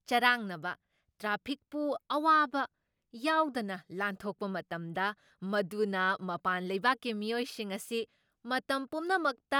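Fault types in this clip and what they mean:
No fault types are present in this clip.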